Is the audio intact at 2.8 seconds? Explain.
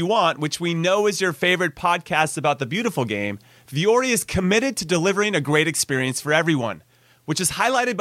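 Yes, the speech at 2.8 s is intact, with no audible fault at that moment.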